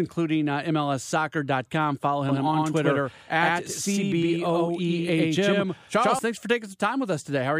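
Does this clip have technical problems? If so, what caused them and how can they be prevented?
Yes. From 2.29 s to 6.19 s the speech carries a doubled audio track. A second full-band copy trails the original by about a tenth of a second at roughly the same level, with no decay or room colour, and it cuts in and out abruptly, starting just before "thanks for". The likely cause is the same signal reaching the mix twice, once through a slower path or through an edit leaving two offset copies. To prevent it, monitor and route only one capture path per source and check edits for overlapping duplicate regions.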